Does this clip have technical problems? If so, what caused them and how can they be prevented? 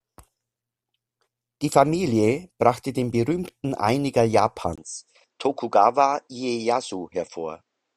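Yes. Input switched to a poorer device at 4.76 s and continues to the end. After a 20 ms gap, the speech loses everything above 8.4 kHz, drops about 5 dB and picks up a faint new background noise, which likely means the system changed microphones mid-recording. Prevent it by fixing the input device in the recording software and disabling automatic device switching.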